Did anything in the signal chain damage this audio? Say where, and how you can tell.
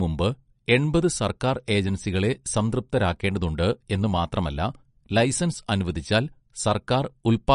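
Yes, at the codec stage, throughout the speech. Nothing sounds above 10.6 kHz, and the audio has a plainly audible watery, swirling texture. This is likely MP3 compression at a bitrate near 46 kbps. Starved of bits, the encoder cuts the treble and toggles weak frequency lines frame to frame.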